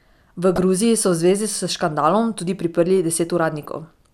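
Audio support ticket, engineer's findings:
DAB burbling at 0.56–0.62 s and 3.56–3.66 s, the second just after "s škandalom tudi priprli": short noise blips over the speech. The probable component is the DAB receiver. Residual bit errors of around a fifth of a percent pass error correction, corrupting MP2 sub-band samples across several frames.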